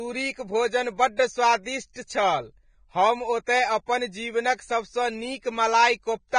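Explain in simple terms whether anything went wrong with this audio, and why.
Something did go wrong, and it lasts the whole speech clip, from the first second to the last. The sound is hissy and grainy, the top end stops dead at about 9.7 kHz, and the starts of sounds are smeared rather than crisp. This is likely heavy Vorbis compression: to save space, the codec throws away the highest frequencies and stores the remaining treble so roughly that its fine detail turns into a sandy noise.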